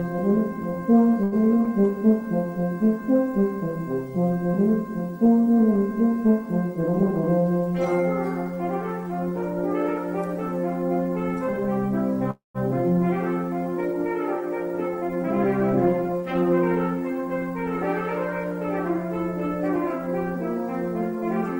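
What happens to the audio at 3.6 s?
Nothing goes wrong at 3.6 s; the audio carries straight through that moment without any dropout, click, glitch or other fault.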